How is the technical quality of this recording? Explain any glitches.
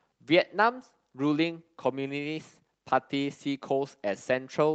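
The speech comes through a call connection with its bandwidth topping out around 8 kHz and no technical faults to be heard anywhere in the recording.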